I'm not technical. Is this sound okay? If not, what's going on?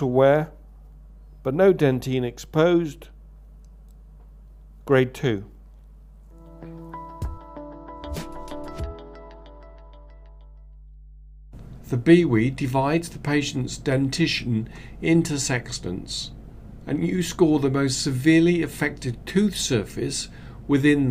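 No. There is mains hum running under the whole recording, from start to finish. It's a steady low drone at 50 Hz, the frequency of the electricity supply, and it sits clearly beneath the sound rather than buried deep. It happens when the power line leaks into the audio, typically through a ground loop between connected equipment or a transformer sitting close to a cable or microphone.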